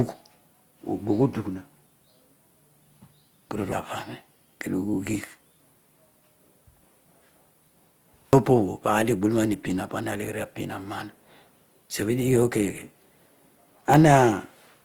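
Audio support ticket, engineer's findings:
Grainy, rough speech throughout, likely Opus compression in CELT mode, fits about 24 kbps. Spectrogram: bands noise-filled rather than holed, content reaching about 20.2 kHz.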